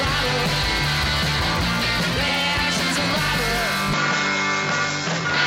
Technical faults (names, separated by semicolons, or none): input switched to a poorer device